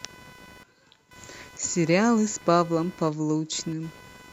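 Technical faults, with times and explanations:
Throughout, computer activity noise: a buzz pulsing around 500 times a second sits roughly 25 dB under the speech. It follows the computer's processing load rather than the speech, because shifting load on the processor or graphics card wobbles the audio circuit's shared ground.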